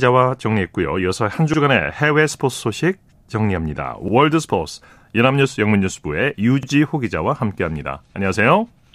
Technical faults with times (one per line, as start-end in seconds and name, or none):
1.54-1.58 overlapping chunks
4.08-4.13 overlapping chunks
6.63-6.68 overlapping chunks